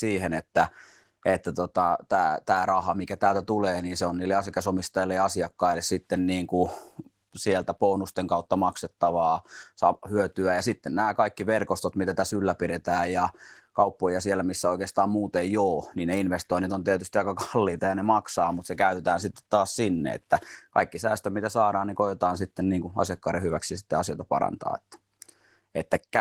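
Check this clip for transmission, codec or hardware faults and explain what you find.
One codec fault runs through the whole clip. Opus voice compression is plainly audible from start to end. It sounds like hybrid coding: linear prediction below 8 kHz, a transform layer above. The coarse excitation points to about 16 kbps. The speech sounds hoarse and slightly robotic.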